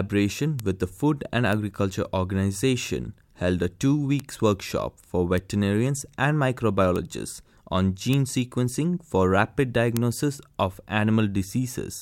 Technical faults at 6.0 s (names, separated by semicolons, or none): none